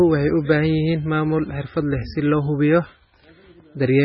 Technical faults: MP3 compression

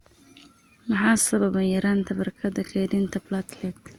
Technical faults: generation loss

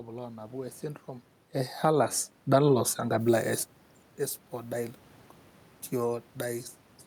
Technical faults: automatic gain rising; pre-emphasis left on

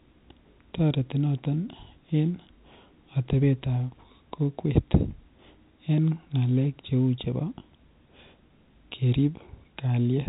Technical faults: none

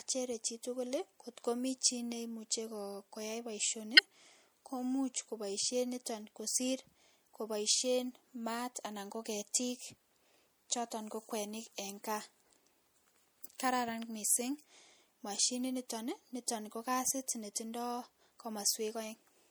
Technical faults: MP3 compression; corrupt frame decoded

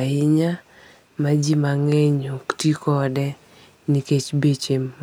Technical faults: none

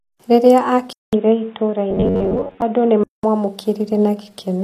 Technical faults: HE-AAC compression; input switched to a poorer device; robotic sound from repeated short buffers

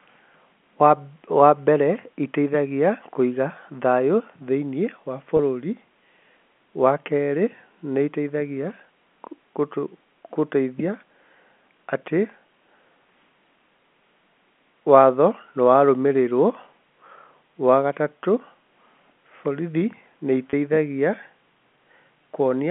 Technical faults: packet loss with pitch repetition

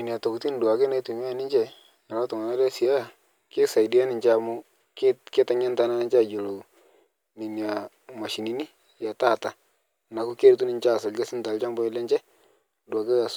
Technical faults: none

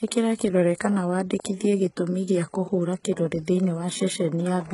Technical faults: HE-AAC compression

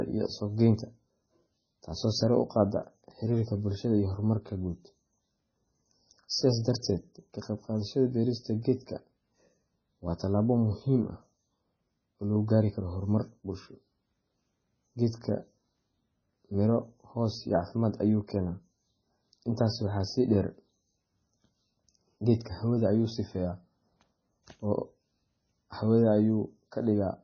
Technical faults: MP3 compression

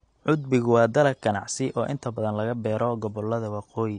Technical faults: AAC compression

